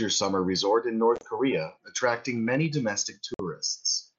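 Around 1.16 to 1.24 s there's unconcealed Bluetooth headset packet loss: roughly 45 ms of audio drops out across 75 ms, in hard-edged gaps up to 30 ms. From 1.67 to 2.66 s a block size mismatch (truncated) chops off each block's tail, giving a 100 Hz buzz. At 3.34 to 3.40 s another loss leaves about 52 ms of abrupt holes, under the light graininess of the mSBC link.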